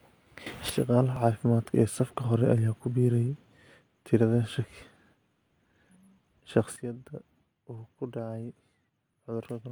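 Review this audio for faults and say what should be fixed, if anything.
A sudden gain jump, likely from a gain step applied without a ramp, lifts the speech and background noise together by about 12 dB from 0.46 to 0.70 s. From 6.76 s to the end they drop by about 12 dB. Ramping every gain change over a few milliseconds would prevent it.

An overlap between stream segments at 1.16 to 1.19 s makes the player discard about 30 ms of audio, so the waveform jumps and a tiny skip is heard. Setting segment time stamps so consecutive segments meet exactly would prevent it.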